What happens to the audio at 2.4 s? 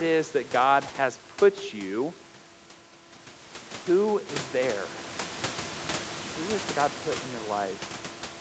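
Nothing goes wrong at 2.4 s; the speech carries on intact through that moment.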